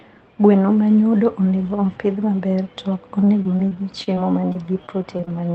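From 3.21 s to 5.29 s, repeated packet loss (robotic sound) sets in. Packets keep going missing, and each hole is bridged by extending the previous sound, with no single gap longer than 28 ms. About 13% of that stretch is patched, so the speech turns choppy over the Opus call path's 8 kHz bandwidth.

Right after, from 5.29 s to 5.53 s, a jitter buffer slow-down follows. The receiver, short on buffered audio or raising its target delay, repeats tiny pieces of the signal to rebuild its reserve, adding 41 ms. Playback drops to 86% speed at unchanged pitch, so the final sounds drag out.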